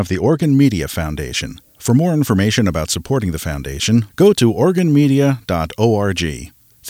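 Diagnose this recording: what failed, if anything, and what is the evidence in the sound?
Pre-emphasis was left on from 0.43 s to the end: the speech turns thin, bright and sibilant, with the top end about 10 dB hotter at 10 kHz than at 1 kHz. The treble lift follows the FM 50 µs curve, turning up around 3.2 kHz. The fault sits at the de-emphasis step, at capture or playback, where the matching cut was skipped. Unlike a harsh microphone or an arbitrary EQ boost, the rise is a smooth, standard shelf.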